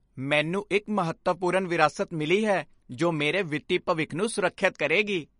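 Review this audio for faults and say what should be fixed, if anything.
Throughout the speech there is a watery, swirling texture, with s sounds turning metallic and consonant attacks smeared, and nothing is present above 10.5 kHz. The likely cause is MP3 compression at a low bitrate, plausibly around 40 kbps. Starved of bits, the encoder discards the top of the spectrum at a hard cut-off and drops quieter frequency components, which flicker in and out between frames and produce the swirl. To prevent it, keep an uncompressed or lossless master and encode at a much higher bitrate.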